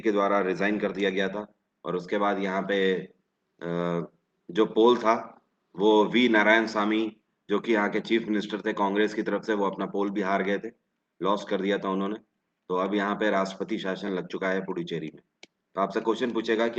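No technical faults can be heard anywhere in this audio.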